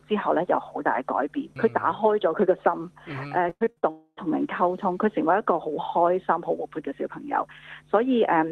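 From 3.49 to 3.85 s, repeated packet loss leaves five gaps, the longest 74 ms, patched by stretching prior audio, so about 60% sounds choppy and robotic. Then, from 3.91 to 4.19 s, a long network dropout, likely, stops arrivals; concealment buzzes, fades, and ends in roughly 50 ms of silence before the audio resumes.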